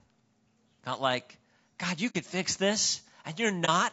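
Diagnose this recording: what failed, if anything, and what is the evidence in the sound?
Throughout the speech, voiced sounds come out rough and grainy, with noise filling the gaps between harmonics and a lowered or synthetic top band. That is the codec stage, likely low-delay AAC compression (AAC-ELD), whose short frames smear pitch detail, and the damage fits a low rate near 32 kbps.

At 2.09–2.16 s the sound fades into a brief hole about 60 ms long, and at 3.65–3.69 s into a brief dip about 30 ms long, both with soft edges. This is AAC frame loss with muting, most likely on the network path: the decoder zeroed the missing frames and the overlapping windows tapered the gaps. A buffer dropout would cut hard and click.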